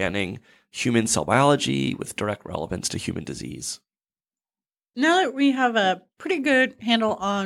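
Nothing goes wrong anywhere in this bit of speech, so there's no technical fault to point to.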